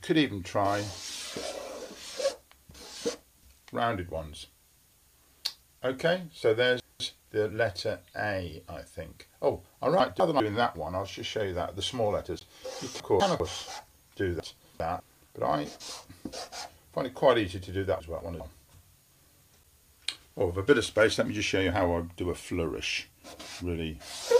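Chunks out of order occur at 6.8–7.2, 10.0–10.4, 13.0–13.4, 14.4–15.0 and 18.0–18.4 s: a 200 ms chunk plays one chunk late (two late at 14.4 s), jumbling the audio with hard joins. A block of digital silence at 12.39 s, about 17 ms of zeros with no fade, cuts the audio out abruptly, as from an unfilled output buffer or invalid calculated values.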